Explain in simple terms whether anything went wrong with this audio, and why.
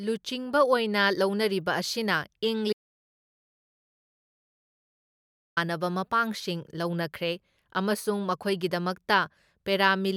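Something went wrong at one point: an audio dropout to silence. Between 2.73 and 5.57 seconds, the recording likely lost its incoming signal, perhaps through a loose connection or a brief mute, while the recorder kept running and writing pure silence. The speech cuts off abruptly, leaving about 2.8 seconds of dead quiet with no background sound at all. It then resumes mid-flow at "ꯃꯄꯥꯡꯁꯤꯡ ꯂꯧꯅꯈ꯭ꯔꯦ ꯑꯃꯁꯨꯡ", and whatever was said during the gap is lost.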